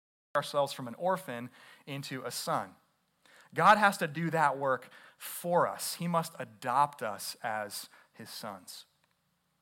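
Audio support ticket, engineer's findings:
Cut-off start. Digital silence 0.00 to 0.35 s, then speech enters abruptly mid-sound at 0.35 s with no attack or fade-in. Probable component: capture/stream start logic. Mechanism: recording or stream opened late, so the onset of the first sound was never captured and playback begins partway through it.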